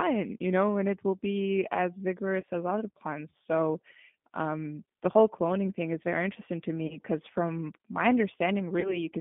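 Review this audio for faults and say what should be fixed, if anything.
G.729 codec damage runs through the whole speech clip. The voice is confined to a line band of about 150 Hz to 3.6 kHz, and it sounds plainly rough and synthetic. At 8 kbit/s, each 10 ms frame is rebuilt from a vocal tract filter, a pitch predictor and a few sparse pulses rather than the real waveform. Prevention: use a wideband codec such as G.722 or Opus at a higher bitrate.

VoIP packet loss concealed by the speech codec occurs at 2.40–2.45 s, 6.87–6.99 s and 8.80–9.05 s. Each event begins with about 30 ms of missing audio, which fits one lost packet. The decoder fills that gap by extending its last pitch and filter with falling gain. Because each frame depends on the one before, the voice stays degraded after audio resumes, which is why the later events run longer. Prevention: add jitter buffering or forward error correction, and carry the call over a network path with less loss.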